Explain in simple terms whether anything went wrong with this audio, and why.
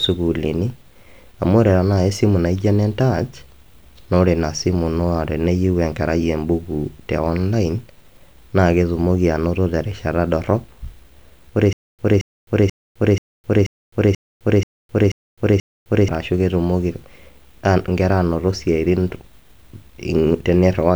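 Playback likely stalled from 11.73 to 16.08 s, causing stutter with silent gaps: one 0.22-second snippet repeats nine times between silences, and the speech meant for that stretch is lost.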